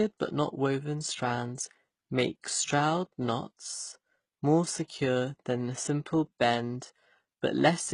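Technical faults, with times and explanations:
Throughout: transcoding between lossy codecs. The speech carries two stacked artefact textures, HE-AAC's swirly, synthetic highs over earlier coding damage, with nothing above 10.1 kHz. This points to AAC-LC at 32 kbit/s, likely re-encoded to HE-AAC at 16 kbit/s, rather than one codec's single texture.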